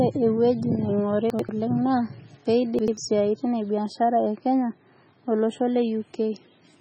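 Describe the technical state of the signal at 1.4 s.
At 1.4 s the audio sits inside a stretch of chunks out of order, running from 1.30 to 1.49 s, just before "oleng naa". Two segments of about 93 ms each play in swapped order, so one arrives a chunk late. Nothing is missing, but the sequence jumps, giving a brief jumbled moment with three hard joins. A waveform shows abrupt discontinuities at those joins, and a spectrogram shows vertical broadband lines where the content breaks off and resumes mid-pattern.

Underneath, the whole signal carries heavy MP3 compression damage, likely from encoding at a very low bitrate near 16 kbps. The encoder has removed everything above 8.9 kHz and keeps dropping weak frequency lines frame by frame, which makes the sound watery and swirly, with chirpy sibilants and smeared attacks. A spectrogram shows a flat ceiling at 8.9 kHz, with patchy, flickering blocks of energy below it.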